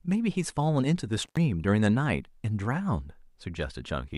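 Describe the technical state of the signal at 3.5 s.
At 3.5 s the speech runs cleanly, with no dropout, clipping, glitch or other audible fault in the signal at that point.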